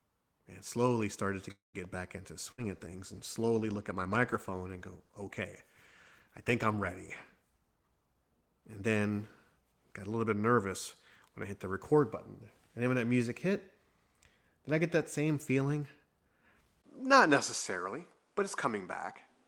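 At 1.51 s, after "slowly started to", a call audio freeze stalls the speech for about a quarter second. A brief fading tail gives way to near-silence. Speech resumes at "back into" with nothing lost, most likely because delayed packets emptied the jitter buffer.

From 2.43 s to 8.47 s a call bitrate drop takes the encoder from 32 to 18 kbps, holding the lowest rate for about 4.6 s. The speech sounds coarser and rougher.

At 2.51 s, just after "back into", a burst of packet loss cuts out about 60 ms. A short fading fill covers it, then speech jumps ahead.

From 7.74 s to 8.89 s a jitter buffer speed-up plays speech at 118% speed with unchanged pitch. About a fifth of a second is trimmed away, so delivery sounds hurried.

At 16.82 s, after a 20 ms silence, the input is likely switched to a poorer device. Nothing above 11.4 kHz remains to the end, and new background noise sits roughly 40 dB down at a similar level.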